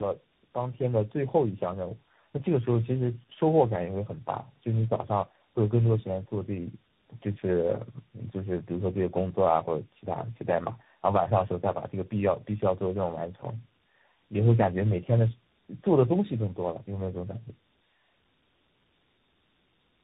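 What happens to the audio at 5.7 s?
At 5.7 s the speech carries tandem speech coding, present throughout the clip rather than at that moment alone. The roughness fits three speech coders in a row, ending in a CVSD-like stage. Each coder decodes and re-codes the previous one's already damaged output, so the errors stack. The speech sounds rough, muffled and warbly. Nothing is heard above 3.8 kHz.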